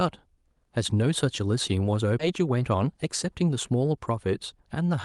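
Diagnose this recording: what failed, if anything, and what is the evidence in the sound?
Network and jitter buffer stage: there's a skip ahead at 2.19–2.21 s. Roughly a second of speech just vanishes and the two sides butt together with no fill. That's a queued chunk being dropped, either in transit or by the jitter buffer when it overflowed, so playback jumped straight to newer audio.

Right after, from 2.31 to 3.50 s, you get a jitter buffer speed-up. The speech runs about 7% fast at unchanged pitch, a bit hurried, as the receiver trims pitch-period slices to shed around a tenth of a second of built-up delay. The Opus path's 12 kHz band limit applies throughout.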